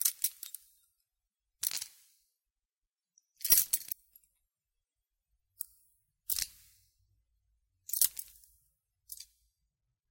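At 3.91 s and again at 8.31 s, damaged data in a compressed stream corrupts part of the encoded file. The decoder misreads the affected frames, loses sync and has to hunt for the next valid frame header before it can carry on. Each time, this cuts into the sound as a very short chirp or blip lasting roughly 10 ms, foreign to the surrounding audio, before normal decoding resumes.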